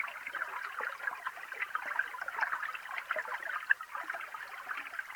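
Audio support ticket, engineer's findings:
Low bit depth without dither, whole clip. Grainy distortion rides on the sound and shifts with it; quiet passages turn gritty, faintest tails sputter or drop out. Likely cause: reduction to 8 bits with plain rounding, no dither, so error tracks the signal. Noise floor sits only around 25 dB below program level.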